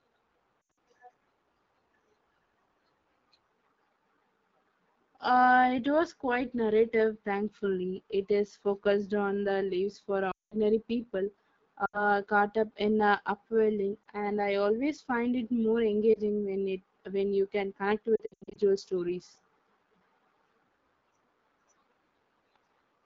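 From start to finish the speech has a rough, raspy grain, with thin, hissy top end. This is the AMR wideband (HD Voice) codec running at a low 8.85 kbit/s. At that rate the pulse-excited vocal tract model can't follow the voice closely below 6.4 kHz, and the band above it is only shaped noise, so the damage is plainly audible throughout.

On top of that come lost AMR speech frames. At 0.62 to 0.78 s the sound stutters and dips in a scattered cluster totalling about 140 ms, with the longest gap around 80 ms. At 10.31 to 10.55 s a solid 200 ms stretch drops away to near silence. A shorter dropout follows at 11.85 to 12.05 s (about 80 ms), then brief warbles at 14.04 to 14.06 s and 16.13 to 16.19 s, each a single-frame blip. At 18.16 to 18.58 s another scattered burst totals about 260 ms. In each case, corrupted frames made the decoder repeat the last good pitch and vocal tract settings at shrinking gain. 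That is why longer runs drop quickly to near silence before the voice returns weak and rough.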